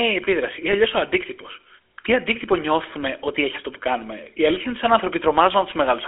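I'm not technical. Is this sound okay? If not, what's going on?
No. From start to finish the speech has gone through the GSM full-rate codec, the old mobile-phone system. It sounds thin and boxy, with nothing above about 3.4 kHz, and has a gravelly buzz. That buzz sets it apart from a plain narrow phone line, which sounds muffled but smooth.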